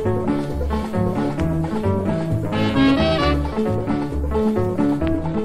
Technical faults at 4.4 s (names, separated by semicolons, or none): MP3 compression